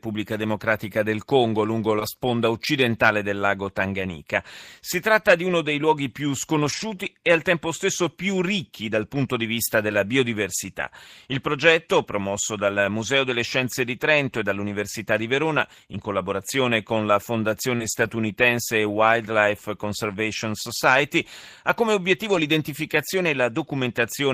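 Right at 1.99 to 2.02 s there's a short concealed packet loss. About 20 ms of speech never arrived in time, so the decoder stretched the last bit of sound to cover the hole and then blended back in, giving a quick smear. The same happens at 17.76 to 17.82 s over a longer stretch of about 40 ms.

Lost packets rebuilt from error correction show up at 2.00 to 2.02 s, 6.64 to 6.82 s, 9.88 to 9.90 s, 14.68 to 14.74 s, 17.80 to 18.10 s and 22.32 to 22.46 s. There are no gaps. Instead, low-bitrate backup copies carried in the following packets fill in, so those stretches sound rougher and noisier. The longest, near 18 s, fits a run of several lost packets.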